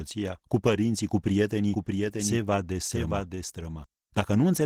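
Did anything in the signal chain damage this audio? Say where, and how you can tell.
Yes. At the codec stage, the whole clip has Opus voice compression. The speech is muffled and a bit hoarse and robotic, which fits low-rate hybrid coding around 16 kbps.

Doubled audio track from 1.72 to 3.84 s, right after "cu părinții cu". A dry copy about 5 dB down trails by roughly 0.7 s and cuts in and out abruptly, likely a slower second capture path.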